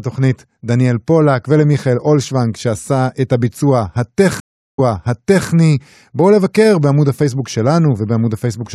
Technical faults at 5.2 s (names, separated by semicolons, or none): stream reconnect